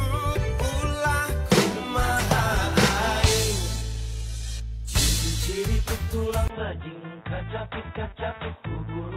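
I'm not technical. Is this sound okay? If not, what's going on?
No. Two kinds of problem can be heard.

Compressed frames skipped: at 2.16 to 2.21 s and again at 3.78 to 3.82 s, the audio jumps forward, dropping roughly 150 ms of sound each time. Compressed audio is stored in small blocks, and here a few blocks were missing or rejected as damaged, which fits three blocks of about 43 ms each.

Input switched to a poorer device: at 6.48 s there is a silence of about 20 ms. After it, through to the end, the sound is duller and a bit quieter, with nothing above 3.8 kHz and a faint new background noise. This is most likely the recording input changing partway through, such as moving from one microphone to a lower-quality one or to a headset in call mode, which carries a narrower range of sound.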